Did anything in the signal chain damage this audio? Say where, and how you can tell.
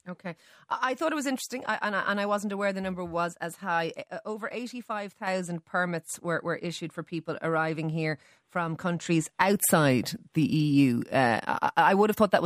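Yes. A sudden gain jump: speech and noise floor drop together by about 6 dB from 4.04 to 5.27 s, before "permits were were issued", then rise about 6 dB at 9.06 s after "people arriving here from". An automatic gain control would ramp instead. This step is instant, so the likely cause is an unramped digital gain change in processing.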